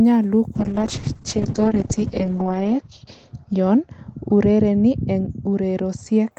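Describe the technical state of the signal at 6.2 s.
At 6.2 s the speech is still inside a call bitrate drop running from 0.56 to 6.37 s. The encoder, starved of bits, codes coarsely and trims the top end to 8 kHz, giving a muffled, watery sound consistent with a fall from about 32 to 7 kbps. Unlike packet loss, it is continuous, with no gaps or glitches.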